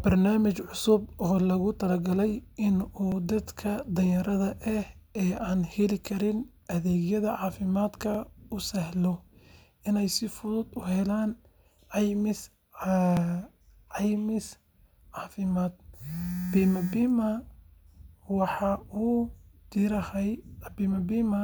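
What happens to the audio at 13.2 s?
Overlapping chunks occur at 13.17 to 13.20 s: the speech was handled in 5-second chunks, and the next chunk begins before the previous one finishes, so about 25 ms of audio is played twice at the join, heard as a brief stutter or click.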